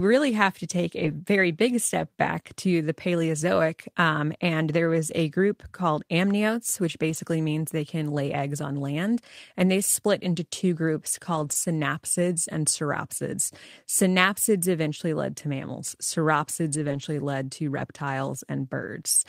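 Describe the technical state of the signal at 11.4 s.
At 11.4 s the speech passes through a lost packet rebuilt from error correction. It runs from 11.35 to 11.53 s, between "split into two groups" and "synapsids and sauropsids". Several packets went missing there. The decoder filled the hole with the low-bitrate backup copies carried in the following packets, so there is no silence. The patched stretch sounds rougher and grainier than the speech around it.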